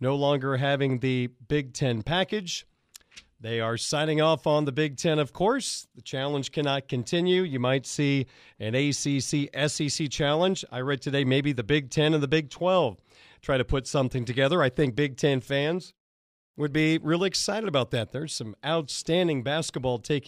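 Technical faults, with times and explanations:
Nothing in this speech recording stood out as a technical problem on listening.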